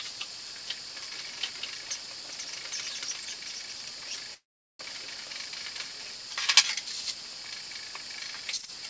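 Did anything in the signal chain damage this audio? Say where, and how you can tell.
Yes: a call audio freeze at the network stage, 4.34 to 4.81 s. A brief fading fill, then about 0.4 s of silence, resuming unchanged with nothing missing, likely packets stalling and draining the jitter buffer.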